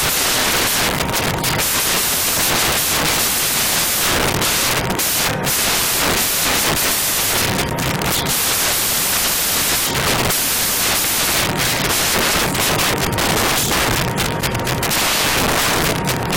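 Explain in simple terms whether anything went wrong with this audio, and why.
Something went wrong for the entire clip, from start to finish. The fault is samples built from the wrong bytes. Each sound sample is stored as several bytes, and the playback software assembled them incorrectly, either shifted by one byte or in reversed order. The tiny, rapidly changing details ended up treated as the main part of each value. The result is loud, harsh noise across the whole recording, close to white noise on the loud sounds.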